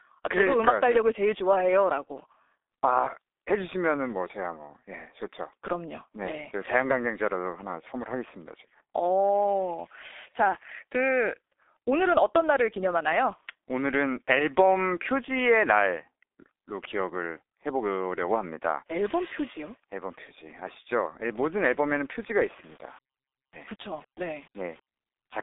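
Speech passes through the G.723.1 codec for the whole clip. Nothing comes through above about 3.8 kHz, and the tone is muffled and hoarse with smeared consonants. That hoarseness, from its slow 6.3 kbit/s voice model, sets it apart from a clean telephone band-limit. From 22.19 to 24.87 s a grainy distortion rides on the sound at roughly 30 dB below it. The likely cause is low bit depth without dither, which fits 8-bit rounding. Unlike steady hiss, the grit follows the signal and drops away in pauses.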